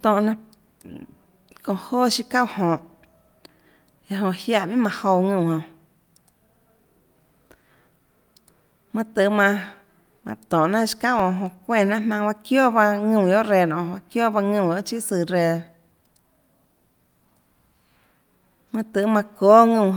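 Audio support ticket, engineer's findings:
CD scratch ticks, 10.66–11.73 s. Disc surface damage exceeding error-correction capacity once per revolution; player interpolating or muting the unrecoverable samples. Result: five regular ticks at roughly five per second, uneven in strength, each a sub-millisecond blip in the speech. Probable component: the source disc, not playback electronics.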